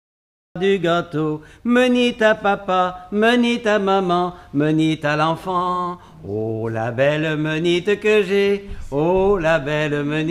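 The clip has a cut-off start. Digital silence runs from 0.0 to 0.56 s, then the audio begins abruptly in the middle of a sound. Capture started late, so there is no natural attack or fade-in. The sound simply switches on.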